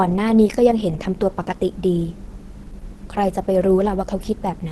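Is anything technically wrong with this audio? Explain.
Yes. Opus compression runs through the whole recording. The speech is cut off above about 12.1 kHz and sounds plainly muffled and hoarse. This is likely the Opus codec in its hybrid mode, which fits a low bitrate of around 16 kbps. In that mode the encoder models the lower band as speech and fills the upper band only coarsely, so detail is lost and the top end stops abruptly.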